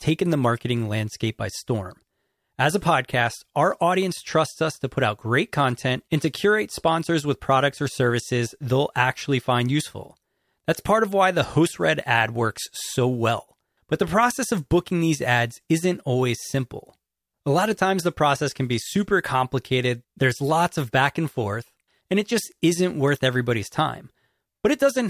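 A speech recording with no technical faults to report at any point in the signal.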